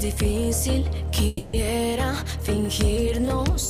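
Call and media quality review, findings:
Long network dropout, 1.27–1.55 s: buzzy fill continuing last sound for about 0.26 s, then audio resumes with that span missing. Likely network loss, receiver concealment. Spectrogram: smeared, fading harmonic band, abrupt restart.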